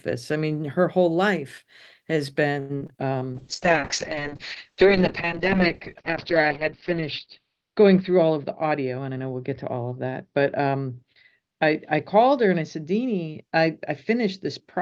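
Speech, with three network faults. From 2.59 to 3.05 s, repeated packet loss gives a choppy stretch: four gaps, the longest about 102 ms, with roughly half the span patched by extending the last sound, unlike a clean dropout. From 3.34 s to the end, a call bitrate drop from 32 to 6 kbps leaves the sound rough and muffled, its bandwidth cut from 20 kHz to 6 kHz, a dullness rather than intermittent holes. Between 8.00 and 9.16 s, a jitter buffer speed-up trims about a tenth of a second, so speech runs 9% faster without any pitch rise.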